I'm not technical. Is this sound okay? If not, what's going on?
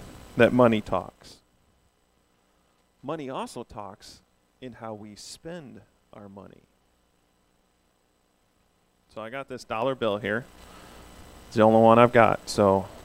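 No. From 0.74 to 1.39 s the level drops sharply with a fast ticking, and from 9.52 to 10.73 s it rises again with slower ticking. This is zipper noise: the volume moves in coarse jumps instead of gliding, and each jump clicks.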